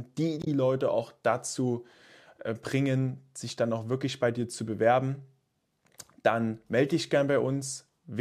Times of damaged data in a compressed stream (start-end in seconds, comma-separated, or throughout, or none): 0.42-0.47